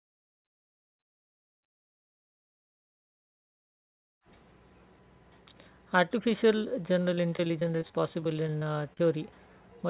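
Speech that turns choppy and robotic from 7.14 to 9.02 s, with a couple of dozen brief dropouts, none longer than about 35 ms. This is repeated packet loss (robotic sound): lost or late packets are patched by stretching the preceding sound, covering roughly a fifth of that stretch. The call path carries nothing above 4 kHz, which fits a narrowband G.711 codec.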